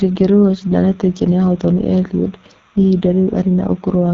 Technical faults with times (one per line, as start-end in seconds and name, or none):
0.00-4.14 timecode bleed
0.00-4.14 AMR wideband (HD Voice) codec